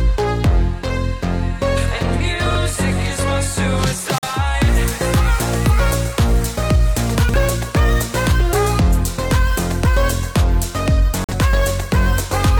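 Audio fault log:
2.46–2.55 s, chunks out of order: one roughly 46 ms block was delivered one slot late, so two blocks swap places. The result is a brief jumbled stutter.
4.18–4.28 s, corrupt frame muted: the decoder rejected a damaged compressed frame and the player substituted silence. The sound drops abruptly into a gap of about 96 ms, and timing is kept.
7.15–7.34 s, chunks out of order: a 46 ms block arrived three blocks late and plays after the three that should follow it. This produces a longer garbled moment of about 190 ms.
11.24–11.34 s, corrupt frame muted: corrupted frame data was refused and replaced with silence. This leaves another abrupt hole of about 96 ms, and the sound resumes on time.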